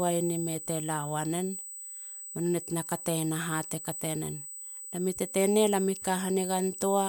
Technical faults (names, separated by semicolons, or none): USB whine